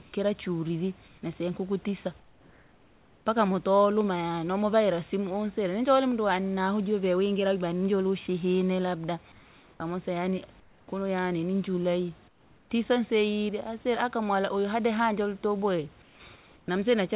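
Comfort noise replaces the background in the pauses at 0.02, 1.08, 2.2 (about 1.1 s), 9.32, 10.6, 12.28, 16.02 and 16.36 s. The room hiss turns smooth and featureless, up to about 6 dB quieter. On a spectrogram these pauses show uniform grey bands below the narrowband 4 kHz ceiling. The likely cause is discontinuous transmission, with synthetic noise filling the gaps.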